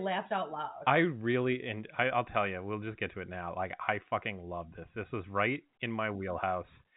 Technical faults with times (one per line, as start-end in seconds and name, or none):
none